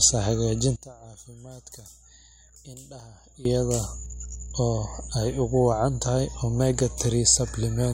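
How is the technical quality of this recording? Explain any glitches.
The recording has two clear problems: a loud hum under the whole clip, and a stretch near the start where the speech nearly drops out.

The hum is mains hum at 60 Hz, present from start to finish and sitting roughly ten dB below the speech, so it's hard to ignore. It's the power line leaking into the signal, most likely through a ground loop or a transformer sitting close to the cabling. You hear it as a steady low drone with a little low harmonic buzz on top.

From 0.76 to 3.45 s the speech falls away by about 19 dB and turns faint. The likely cause is one channel inverted: one side of the stereo pair has its polarity flipped, so when both sides are summed to mono, everything common to them, the centred speech in particular, cancels out. What's left is just the small difference between the channels, a faint ghost of the speech until the level snaps back.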